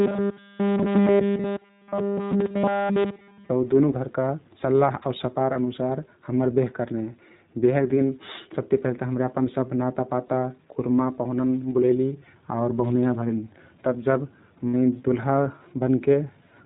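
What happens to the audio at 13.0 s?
At 13.0 s the speech is still under the iLBC codec, which runs through the whole clip. It codes each short frame independently, which fits 20 ms frames near 15.2 kbps, leaving a rough, synthetic edge. A spectrogram shows a hard ceiling at 4 kHz, with nothing above it.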